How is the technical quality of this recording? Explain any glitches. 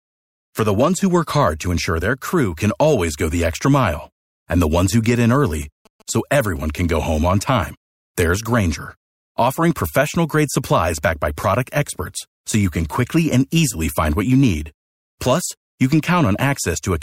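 The recording carries one interference fault: GSM signalling bursts from about 5.54 s to 7.43 s, just after "ones who get in". A nearby 2G phone was exchanging short groups of radio bursts with the network, as it does before a call or text comes in. The audio circuitry rectified that RF, turning it into a galloping dit-dit-dit of brief buzzes at about 217 Hz, sitting roughly 30 dB below the speech.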